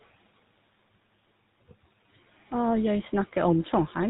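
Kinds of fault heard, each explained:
GSM full-rate codec: The speech runs through the old first-generation GSM coder the whole way, and the damage is plain to hear. It models the vocal tract and excites it with a sparse, regularly spaced pulse train, so voiced sounds come out buzzy and gravelly. Nothing survives above 4 kHz, which dulls the top end. The overall roughness fits that codec's 13 kbps rate. The room noise, about 23 dB below the speech, passes through with the same treatment.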